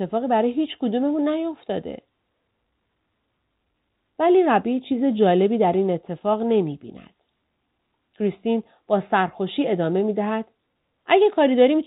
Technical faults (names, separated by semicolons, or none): none